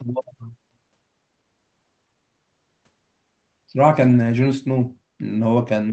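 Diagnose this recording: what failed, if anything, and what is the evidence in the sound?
Echo leak at 4.08 to 4.17 s, in call processing: a faint copy of the speech trails about 249 ms behind, well below it in level. It is likely loudspeaker pickup that the far-end echo canceller missed. A spectrogram shows weak repeated harmonic traces shifted 249 ms, inside the 8 kHz Opus band.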